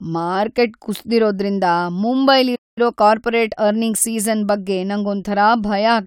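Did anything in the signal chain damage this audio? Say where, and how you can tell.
Yes. At 2.55 s the speech cuts to silence for about 0.21 s until 2.78 s: a playback stall, likely the player's buffer running dry.

From 2.78 to 4.18 s the speech is hurried at about 1.15 times normal speed with unchanged pitch. This is time-compressed catch-up, where playback splices out small pieces to recover its backlog.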